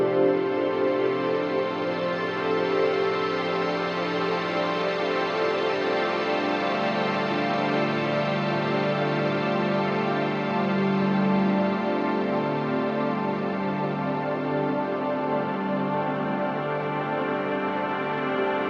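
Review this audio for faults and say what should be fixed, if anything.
Nothing stood out on listening to this recording, so there is nothing here that needs fixing.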